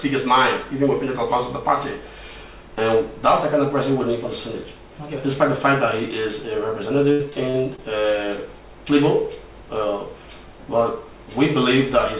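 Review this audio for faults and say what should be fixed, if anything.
Between 7.12 and 7.80 s the call suffered repeated packet loss (robotic sound): four stretches of packets went missing or arrived too late, the longest about 76 ms and roughly 160 ms in all. The jitter buffer papered over each hole by extending the preceding sound, so nearly a quarter of that span is synthetic fill. The result is a choppy stutter with fragments dropped, within the 4 kHz-limited G.711 band. Prevent it by fixing network congestion or adding forward error correction and a deeper jitter buffer.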